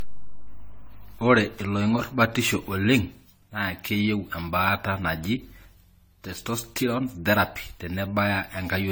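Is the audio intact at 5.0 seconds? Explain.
No. Generation loss affects 5.0 s, as it does the whole clip. The speech sounds like it was likely decoded and re-encoded around ten times through a lossy codec, consistent with AAC-LC at 64 kbit/s. Each pass quantised the signal again on a shifted frame grid, so noise and spectral gaps built up. The result is swirly, smeared and hollow beyond what that bitrate alone would give, with softened attacks.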